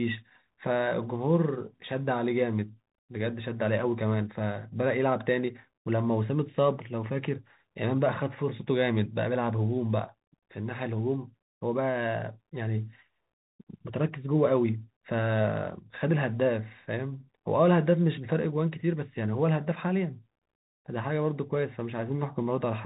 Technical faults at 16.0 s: Bluetooth CVSD headset codec

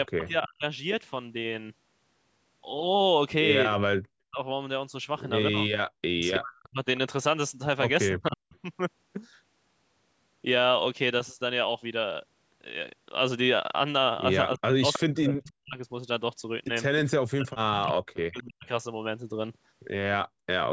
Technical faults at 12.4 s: none

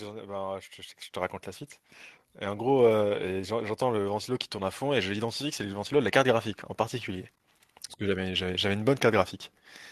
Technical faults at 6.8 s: none

